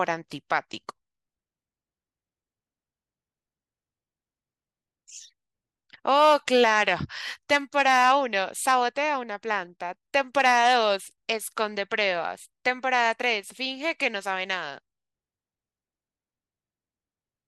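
No technical faults can be heard anywhere in the recording. Nothing in the audio calls for a timestamp or further comment.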